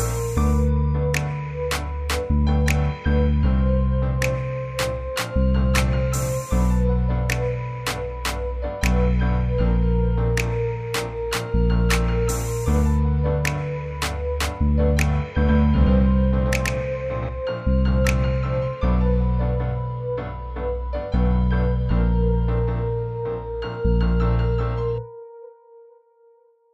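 From 15.49 s to 17.29 s you get a doubled audio track: a second, full-band copy of the sound trailing the original by roughly 150 ms, and at about the same loudness. It has no tail or room colour, so it reads as a hard slapback rather than reverb, and it cuts in and out abruptly at both edges. Most likely the signal got picked up twice, once through a slower path, and the two were summed.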